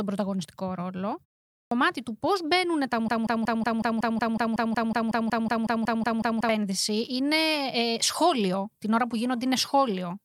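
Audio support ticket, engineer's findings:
Clipped start after a pause, 1.57 s: following "πρωταγωνιστικό ρόλο" and a 0.4 s silence, the onset of "του πώς" arrives with about 144 ms of its start missing. Output device sleeping in silence, then waking or re-locking too slowly. Waveform: flat line into a sudden edge, no attack ramp. Spectrogram: hard vertical boundary where energy begins mid-sound.

Broken-record loop, 3.08 to 6.49 s: one 185 ms fragment repeats back to back 18 times, with the intended audio for that span lost, until playback resumes at "είναι ε σχόλιο". Likely a stalled player, encoder or stream re-sending its last held buffer. Spectrogram: identical tiles every 185 ms. Waveform: exact periodic copies with a seam at each repeat.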